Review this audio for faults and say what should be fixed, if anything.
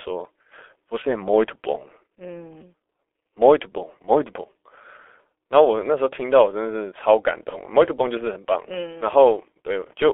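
Throughout the clip the speech sounds muffled and hoarse, with smeared consonants and nothing above about 3.4 kHz or below 300 Hz. This is heavy G.723.1 codec damage. The codec models speech in coarse 30 ms frames at a very low rate, which fits its 6.3 kbit/s mode, so fine spectral detail and fast transitions are lost. Carrying the call on a wideband codec such as G.722 or Opus would prevent this.

From 7.49 s to 7.60 s the speech briefly turns into a buzzy tone or coloured noise that fades, and then stays weak or distorted before recovering. This is VoIP packet loss concealed by the speech codec. The decoder filled the gap by repeating its last pitch and filter settings at falling gain, which fits a single lost 30 ms frame, and the following frames took time to rebuild. Adding jitter buffering and forward error correction on the network path would prevent it.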